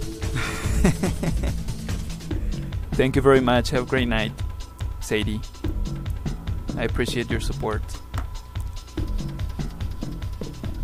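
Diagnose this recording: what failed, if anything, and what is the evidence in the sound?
Nothing failed at any stage in the chain, and there is no audible evidence of a fault anywhere in the recording.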